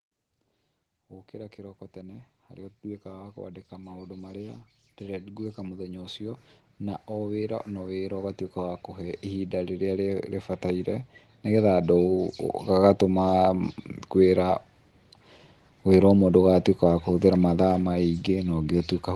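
A speech recording with automatic gain rising: from 1.3 s to 13.59 s the gain control treats the input as too quiet and steadily lifts it by about 21 dB, so voice and room noise swell together rather than the talker getting louder. On a waveform the envelope widens slowly across those twelve seconds, noise floor included. A spectrogram brightens uniformly in every band, and above a ceiling near 12 kHz it stays empty, which points to the Opus call path it passed through.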